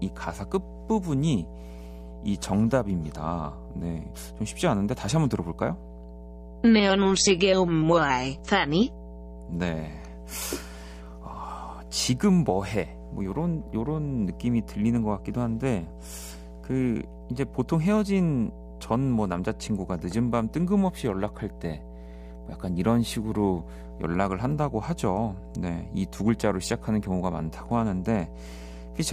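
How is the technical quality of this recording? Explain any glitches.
The recording has one clear flaw. Mains hum runs through the whole clip. A steady 60 Hz tone sits under the speech, about 15 dB below it, with some low harmonics. A ground loop or nearby transformer is leaking the power line into the signal path.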